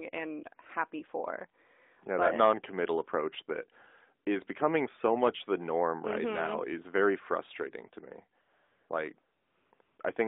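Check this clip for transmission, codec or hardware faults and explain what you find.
One fault appears: AMR comfort noise, in four stretches near the end, at 8.42–8.90 s, 9.22–9.72 s, 9.74–9.80 s and 9.82–9.98 s. The phone judged these pauses silent and stopped sending speech frames, so the receiver synthesised smooth, steady noise in place of the real background. That noise switches in and out abruptly at each edge, against the narrowband mobile line's band of roughly 250 Hz to 3.7 kHz.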